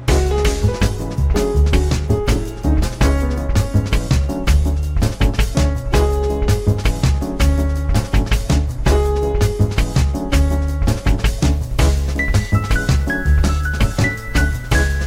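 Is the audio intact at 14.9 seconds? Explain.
No. From 11.46 s to the end, low bit depth without dither leaves gritty, signal-following distortion roughly 35 dB below the sound, likely from truncation to about 7 bits. The waveform shows coarse stair steps, and the spectrogram shows grainy broadband error that rises and falls with the signal.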